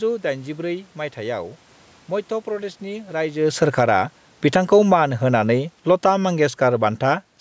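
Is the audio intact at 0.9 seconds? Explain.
Yes, the speech at 0.9 seconds is intact, with no fault at that moment.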